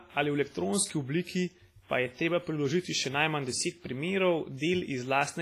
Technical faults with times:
0.00-5.41 WMA compression

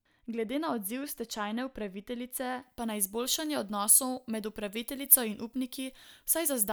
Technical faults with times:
2.62-6.72 pre-emphasis left on

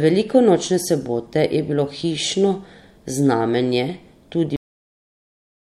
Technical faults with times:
4.56-5.64 cut-off end

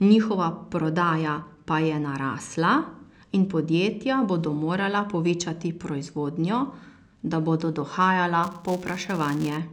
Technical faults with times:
8.43-9.58 filter restarted on every block

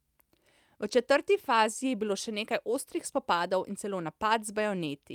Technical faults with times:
none

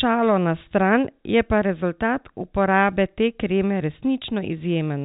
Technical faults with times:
none

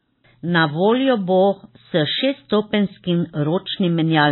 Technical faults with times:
0.00-4.31 MP3 compression

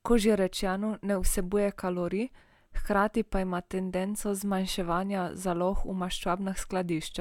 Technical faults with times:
none

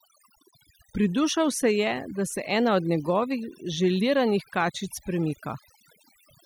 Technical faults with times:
0.00-6.45 overdone noise removal

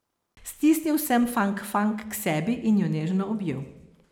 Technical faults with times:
none

